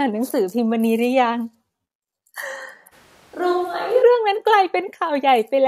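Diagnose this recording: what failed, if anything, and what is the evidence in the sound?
At 2.94 s the speech turns roomy and hollow, with thinner bass and about 5 dB less level. Background noise rises but stays well below the speech. At 4.01 s the close sound returns abruptly. This is likely a switch to a distant microphone at the capture stage.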